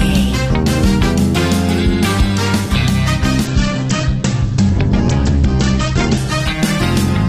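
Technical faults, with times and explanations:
3.46–7.29 s, call bitrate drop: the top end collapses from about 20 kHz to 8 kHz and the sound turns coarse and watery, pointing to the encoder falling to roughly 9 kbps. It holds its lowest for about 2.5 s and never recovers. Unlike a plain low-pass filter, the band-limited sound also carries grainy, smeared coding artefacts.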